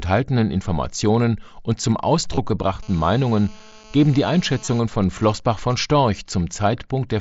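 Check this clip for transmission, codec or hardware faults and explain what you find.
Three kinds of fault are audible in this speech: two brief concealed dropouts from the Bluetooth headset link, a steady GSM buzz, and then GSM signalling bursts. The wideband mSBC headset codec underneath adds only its light graininess.

Concealed Bluetooth headset packet loss occurs twice, at 2.35 to 2.38 s (about 22.5 ms) and 4.65 to 4.68 s (about 30 ms). The lengths fit three and then four lost headset frames. The receiver filled each gap by repeating the closest-matching piece of the preceding waveform. The result is a short buzzy, held tone at full level with a slight warble as real speech resumes. A plain dropout would go silent, and these gaps don't.

GSM phone buzz runs from 2.83 to 4.80 s. A nearby 2G phone in a call transmits radio bursts 217 times per second, and the audio circuitry rectifies them into sound. 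The buzz is a hard, raspy 217 Hz tone, rich in harmonics, about 25 dB below the speech. It stays constant and ignores what the talker does. That steadiness separates it from mains hum, which sits at 50 or 60 Hz and is smoother.

GSM signalling bursts follow from 4.92 to 5.76 s. These come from the same 217 Hz pulse source, well below the speech level. The phone is still in the call, but while the talker is silent it sends only occasional groups of bursts. These are rectified the same way, giving even ticks with a longer buzz twice a second. That broken rhythm distinguishes it from the continuous buzz just before it.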